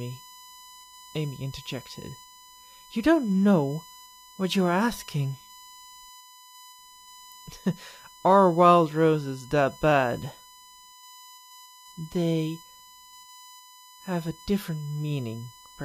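USB whine runs throughout the speech, a steady 1 kHz tone sitting roughly 25 dB below the voice. The bus draws current in 1 ms frames, and that pulsing leaks into the audio through shared power or ground, producing a fixed-pitch whine.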